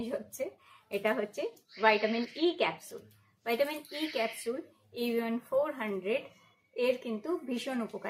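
No technical faults can be heard anywhere in the recording.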